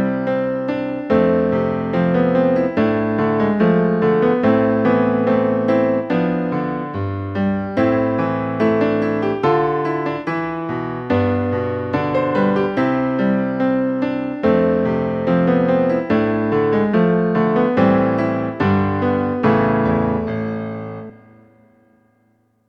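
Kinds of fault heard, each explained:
No technical fault can be heard anywhere in the audio. There is nothing here that calls for a line of its own.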